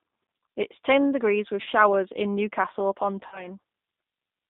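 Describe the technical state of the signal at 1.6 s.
Right after "is ten degrees with", from 1.62 to 1.69 s, VoIP packet loss concealed by the speech codec: about 40 ms of audio was lost. The decoder repeated its last pitch and filter at falling gain, giving a fading buzzy tone or coloured noise that shows as smeared, flat harmonics. Throughout, G.729 codec damage is plainly audible: rough, synthetic speech confined to 200 Hz–3.7 kHz, which fits an 8 kbit/s codec. On a spectrogram, nothing appears above 3.7 kHz.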